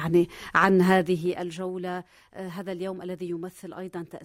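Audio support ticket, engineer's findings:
Ticking/zipping riding on the audio, 0.85 to 1.70 s, while level falls roughly 15 dB. Zipper noise: gain stage stepping in 2 dB increments, around ten steps a second, no interpolation between values. Each jump is a small discontinuity, heard as a click. Suspect unsmoothed gain/volume control updating per block.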